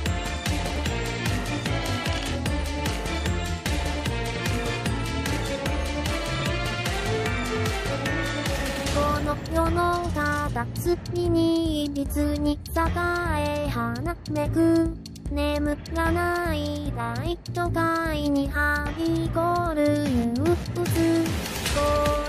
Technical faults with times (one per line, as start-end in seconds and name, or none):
6.36-6.42 chunks out of order